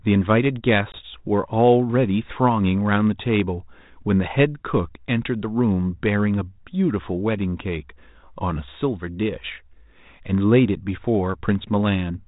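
At 0.92 s the speech drops into a hard-edged 20 ms hole, about one lost packet, the kind of packet loss on an ADPCM call that G.726 at 32 kbit/s suffers. Unlike a clean dropout, the sound returns slightly distorted until 0.99 s, while the decoder's predictor and step size resettle.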